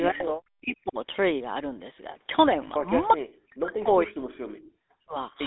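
Throughout, the speech passes through the GSM full-rate codec, which fits a 13 kbps stream. It removes everything above 3.9 kHz and leaves a buzzy, gravelly roughness. From 0.11 to 0.98 s, 3.48 to 4.25 s and 4.72 to 5.15 s, the speech is likely suppressed in double talk by an echo canceller, dropping by around 40 dB.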